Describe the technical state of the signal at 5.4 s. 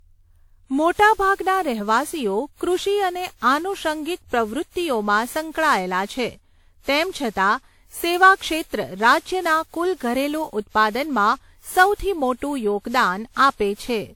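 At 5.4 s the speech carries generation loss, present across the whole clip: it sounds swirly, hollow and smeared, with softened attacks and nothing above 19.5 kHz. This is likely from around ten successive lossy re-encodes, consistent with repeated WMA passes near 96 kbit/s.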